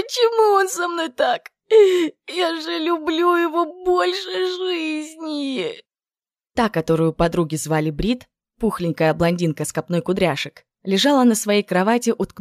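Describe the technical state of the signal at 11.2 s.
At 11.2 s the signal is intact, with no audible technical fault at that moment.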